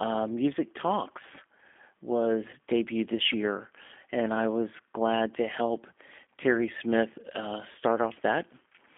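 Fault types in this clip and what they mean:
G.729 codec: Throughout, the speech has been squeezed to 8 kbit/s by a codec that resynthesises each 10 ms frame from a vocal tract filter, a pitch predictor and a handful of pulses rather than sending the waveform. The line band runs from about 250 Hz to 3.4 kHz, so the sound is thin and telephone-like. The codec damage is plainly audible as slightly rough, synthetic-sounding speech.
VoIP packet loss concealed by the speech codec: At 2.51 to 2.56 s, just before "debuted this year and", one packet carrying 20 ms of audio went missing. The decoder filled the gap by extending the previous frame's pitch and filter at a falling gain, so the sound is briefly stretched out and fades. Because each frame builds on the one before, the audio stays weak or distorted for a short while after the packets resume.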